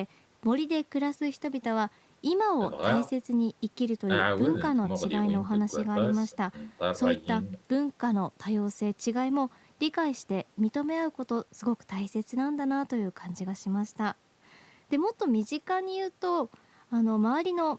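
Nothing stood out on listening to this speech, which carries the ordinary sound of a call path, with its content ending at about 8 kHz.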